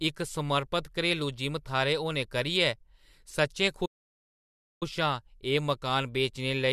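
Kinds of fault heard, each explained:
Playback stall: the player likely ran short of data or had its thread blocked, so output dropped to silence mid-flow. In this speech the sound halts at 3.85 s for about 0.96 s, then resumes at 4.83 s.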